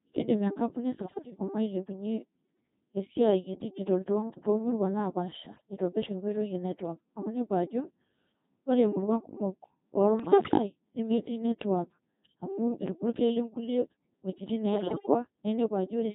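Throughout, the speech has passed through the Codec 2 vocoder at a very low bitrate, which fits about 2.4 kbit/s. Only pitch, voicing, level and a rough spectral envelope survive, and the decoder rebuilds everything from sine waves, so the speech sounds heavily robotic and buzzy.

Bit errors on digital voice radio corrupt frames at 0.98–1.32 s, 5.46–5.62 s, 10.20–10.58 s and 14.74–15.14 s. Flipped bits scramble each frame's parameters, so the voice jumps in pitch, level and tone into warbling, bleeping gibberish. The final burst is the most garbled, with the highest error rate.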